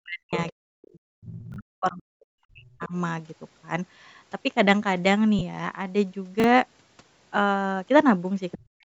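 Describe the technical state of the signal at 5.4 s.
At 5.4 s there is a gap from lost LE Audio frames, running from 5.39 to 5.42 s. About 20 ms of audio is missing, which fits two lost 10 ms frames. The LC3 decoder filled the hole by repeating the last good spectrum with randomised signs. So the sound does not drop out cleanly. Instead it smears into a brief noisy blur. The loss is too short for the concealment to fade toward silence.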